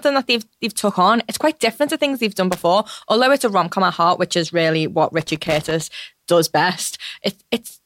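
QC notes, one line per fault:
2.52–2.63 s and 5.21–5.82 s, loose connector crackle: two irregular bursts of scratchy crackle cut into the speech, the first brief at about 0.11 s, the second longer at about 0.6 s. A worn or dirty contact in the signal path is making and breaking as it shifts. Each break chops the audio into ragged fragments, and any DC on the line turns every reconnection into a pop, giving the uneven, gritty texture.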